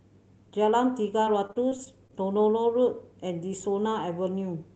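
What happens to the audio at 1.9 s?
At 1.9 s there's repeated packet loss (robotic sound) from 1.25 to 2.13 s. Lost packets are patched by stretching earlier sound, giving choppy speech with pieces missing; spectrograms show smeared, repeated frames and breaks up to 23 ms.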